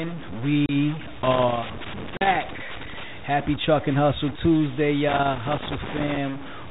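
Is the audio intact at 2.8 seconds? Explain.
No. A worn or dirty contact is making and breaking as it moves, a loose connector crackle running from 1.24 to 3.04 s. Each break chops the speech signal, so 2.8 s sits inside an irregular burst of scratchy crackle.

Throughout the clip, including this moment, the speech carries distortion, and the gaps between phrases fill with noise. The likely cause is a stuck bit in the converter or data line, forcing one bit to a fixed value and pushing about half the samples off by that bit's weight.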